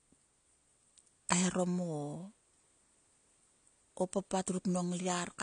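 Throughout, the speech sounds dull and smeared, with nothing above 9.8 kHz and fizzy sibilants: likely AAC compression quantising coarsely, consistent with roughly 32 kbps.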